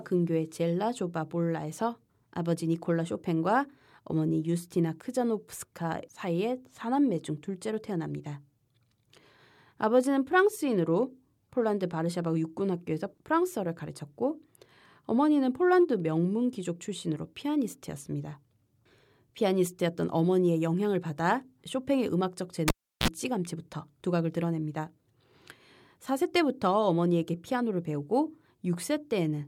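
At 22.68 s a live cable is pulled and plugged in again: the connection breaks with a pop, the speech drops to near silence for about 350 ms, then a 44 ms burst of 60 Hz mains buzz sounds as the plug tip touches, and a second pop brings the sound back at 23.08 s.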